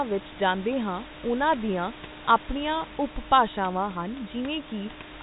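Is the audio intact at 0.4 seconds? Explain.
Yes, the audio is intact at 0.4 s, with only the room noise about 14 dB under the speech and the normal narrowband telephone sound of G.711 coding, which passes nothing above about 3.8 kHz.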